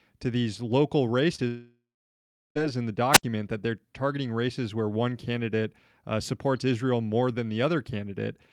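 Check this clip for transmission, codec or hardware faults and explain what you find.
Three faults affect this speech clip, all clustered in its first few seconds.

From 1.35 to 1.43 s there is short concealed packet loss. About 20 ms of audio failed to reach the decoder in time, so the receiver patched roughly 29 ms by extending the preceding sound before blending back. The result is a brief smear or wobble in the speech.

From 1.47 to 2.57 s, about 1.1 s of audio goes missing. This is most likely a long network dropout. The receiver's concealment carries on the last sound as a fading buzz or hiss, which then gives way to roughly 0.73 s of silence. The speech resumes later with that stretch gone.

From 3.12 to 3.23 s there is a wireless microphone squelch dropout. The FM radio link weakened enough for the receiver's squelch to mute its output. There is a short rise in hiss, then a hole of near silence lasting about 70 ms, before the speech returns.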